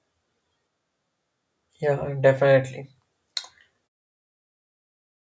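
Nothing stood out on listening to this speech clip, which simply fades out smoothly near the end.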